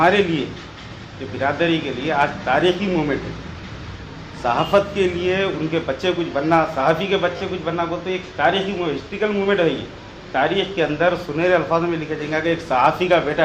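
At 7.36 to 7.41 s, a short run of compressed frames was sent twice over, so the decoder replays the same sliver of sound two extra times. This repeated frames fault is heard as a quick stutter, and it lengthens the audio by 40 ms, consistent with 20 ms frames.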